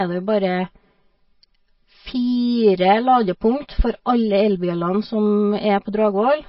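From start to finish the speech carries channel delay (comb filtering): one channel trails the other by around 5 ms, and summing them cancels energy at evenly spaced frequencies starting near 100 Hz. The result is a steady hollow, phasey tone whose notches stay fixed rather than sweeping like a flanger.

Running alongside it throughout, nothing is heard above 5.6 kHz, and the remaining sound turns plainly watery and swirly, with smeared consonant attacks. This is likely MP3 compression at a very low bitrate, perhaps around 24 kbps, with frame-to-frame switching that a static filter would not produce.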